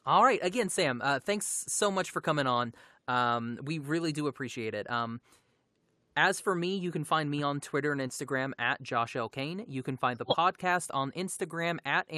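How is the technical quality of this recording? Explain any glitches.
There is one glitch in the speech. Short concealed packet loss at 8.07 to 8.11 s: about 20 ms of audio arrived too late to decode, so the receiver filled the gap by extending the preceding sound and blending back into the real signal, heard as a brief smear or wobble.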